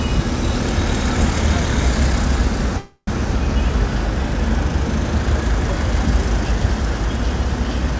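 A recording of everyday sounds, carried over a call path whose G.722 coding leaves nothing above 8 kHz, has a call audio freeze from 2.78 to 3.10 s. The last sound is stretched into a fading buzz or hiss for about 0.3 s, with the final 80 ms silent. The sound then resumes exactly where it stopped and runs about 0.29 s late. A dropout would lose sound, but nothing is missing here. This points to delayed packets, likely leaving the jitter buffer empty.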